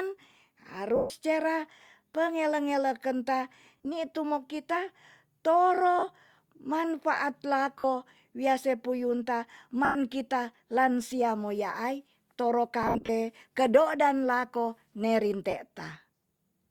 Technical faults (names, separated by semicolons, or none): lost LE Audio frames